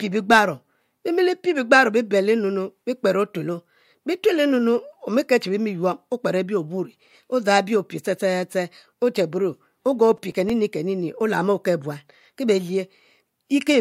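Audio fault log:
10.17–10.50 s, processor overload crackle: around ten missed buffer deadlines in a row, each patched with repeated old audio with hard edges, giving gritty tearing; consistent with buffers of a few milliseconds.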